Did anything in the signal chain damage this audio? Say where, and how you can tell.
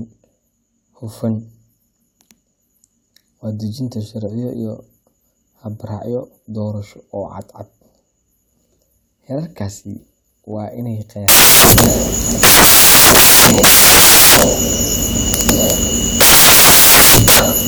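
Yes. From 11.28 s to the end, the speech is replaced by loud, harsh broadband noise, close to white on the louder passages. That is samples built from the wrong bytes, a sample-format conversion fault: the reader assembles each sample with its bytes misaligned or swapped, so the rapidly varying low-order bits land in the most significant positions. The waveform's shape is lost, and the result is loud noise.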